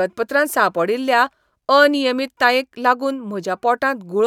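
No faults are audible anywhere in the recording, with nothing in it standing out from the surrounding speech.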